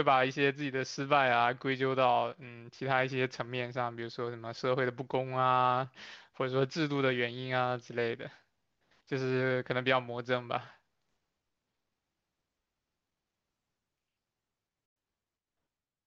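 At 14.86 s the speech cuts out in a digital broadcast dropout. The receiver stopped getting valid frames and muted its output. The sound falls to silence almost at once, over a fade of about 3 ms, so it reads as an abrupt hole. The silence lasts until 14.96 s, a gap of 96 ms, which fits roughly three lost frames. Whatever was transmitted in that gap is gone, and the programme resumes further on.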